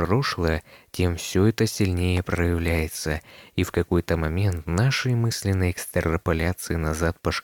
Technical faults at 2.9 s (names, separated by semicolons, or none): none